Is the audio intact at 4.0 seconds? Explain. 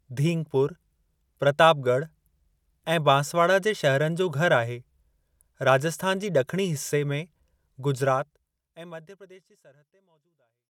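Yes, the speech is intact at 4.0 seconds, with no fault at that moment.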